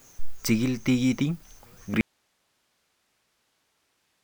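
A speech recording whose sound cuts off abruptly at 2.01 s and never returns, leaving only a low bed of hiss, something like 50 dB below the level of the talking, through to the end of the clip. The break is sudden, not a pause or a fade. This is an audio dropout to a faint residue, likely a lost feed upstream while the rest of the path stayed live and kept passing its own noise.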